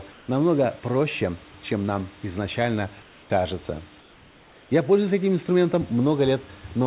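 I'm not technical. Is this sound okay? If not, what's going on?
No. At 0.12 to 0.28 s (just before "намного проще чем"), 3.02 to 3.3 s and 4.0 to 4.7 s, the real room background becomes a flat, slightly quieter hiss. This is comfort noise in place of the background, likely because the call system stopped sending during pauses and filled them with artificial noise.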